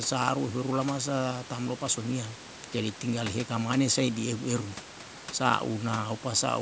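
No technical faults occur in this speech at any point, so there is nothing to describe in time order, though the call microphone processing limits the sound to nothing above 8 kHz.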